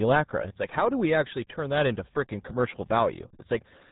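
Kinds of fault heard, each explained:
RealAudio 14.4 codec, throughout: the speech has gone through a very low-rate voice codec of the dial-up era, and the heavy damage fits a stream of about 8 kbit/s. At that rate the coder discards most of the signal and rebuilds the voice from a crude model, so syllables come out muffled and gargly with a watery smear on them. The band stops hard at 3.8 kHz, leaving no air or sibilant detail above it.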